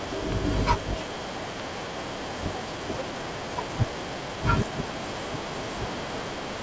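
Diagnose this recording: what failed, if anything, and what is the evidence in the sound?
Two loud pops sit on top of the speech, at 0.32 to 0.34 s and again at 1.60 to 1.62 s, each one sharp thump roughly 15 dB above the talker. The speech carries on underneath. That's likely an electrical transient in the analogue wiring, such as a plug or static discharge, shaped by the following circuitry.

At 2.68 to 2.70 s there's a skip ahead, a buffer or network-stage fault. Around a second of speech just vanishes, with no fill, and the two sides butt straight together. The jitter buffer most likely overflowed and dumped the backlog to cut delay.

Right after that, from 2.77 to 4.72 s, comes a jitter buffer speed-up. The talker runs at about 111% with unchanged pitch, sounding hurried. The buffer was still over target, so it trimmed pitch-period-sized slices, about a fifth of a second in total, through the G.722 call path.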